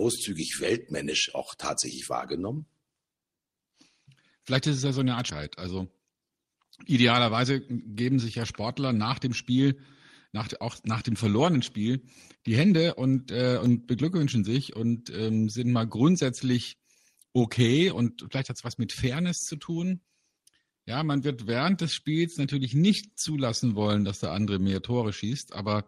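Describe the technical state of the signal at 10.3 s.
At 10.3 s the speech signal is intact, with no audible dropout, distortion, glitch or other technical fault.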